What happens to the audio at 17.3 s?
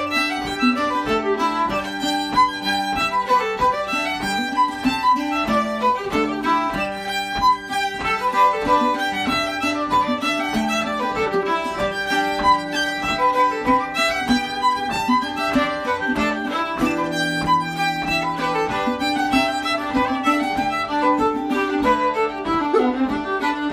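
Nothing goes wrong at 17.3 s; the audio plays through that point intact.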